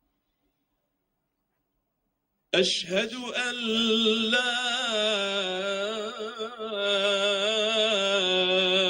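Right at the start, from about 0.02 s to 2.53 s, there's sound cut by the noise suppressor. It mistook part of the audio for background noise and pulled it down harder than everything else, by about 21 dB at the deepest point. Across roughly a second and a half of that stretch, the steadier, sustained parts sink and their tails get chopped short, while the sharper onsets still poke through.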